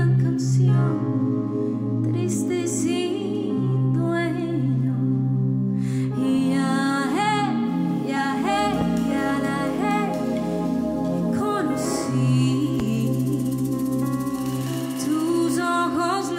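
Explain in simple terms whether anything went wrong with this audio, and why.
A loud pop, twice: once at 8.81 s and again at 12.80 s, each lasting only about 30 milliseconds. Each one is a single sharp crack that sits well above the surrounding sound, which keeps going underneath without a break. The likely cause is a sudden jolt of electricity, such as a bumped plug, a flicked switch, a spark of static or a hiccup in the audio hardware, briefly pushed into the signal.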